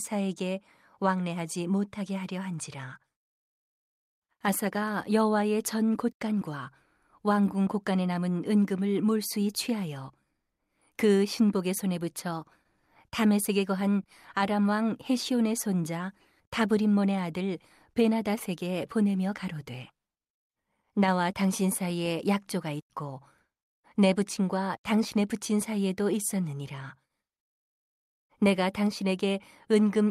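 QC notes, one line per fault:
No technical faults are audible anywhere in the recording, and the signal holds steady across its whole duration.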